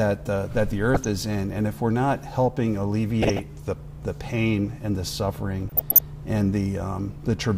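DAB burbling appears at 0.94–1.06 s, 3.22–3.39 s and 5.69–6.00 s. Weak reception lets scattered bit errors, a few per thousand, slip past error correction and corrupt sub-band scale factors, so single bands jump in level frame by frame. It sounds like short blips of noise. A spectrogram shows short, isolated rectangular blocks in narrow bands.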